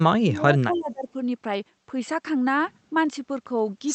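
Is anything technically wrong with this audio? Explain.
Yes. Speech suppressed in double talk occurs twice. From 0.00 to 0.47 s and again from 0.63 to 1.07 s, the echo canceller likely mistook overlapping far-end sound for its own echo and clamped the near talker, so the speech sinks by roughly 25 dB, then about 20 dB.

An echo leak appears between 0.72 and 0.81 s: the loudspeaker side's canceller likely let part of the returned signal through, so a faint delayed copy arrives 263 ms late at roughly 35 dB below the speech, heard as a brief ghostly scrap. The call path itself, running Opus at 32 kbps with an 8 kHz bandwidth, limits the top end as expected.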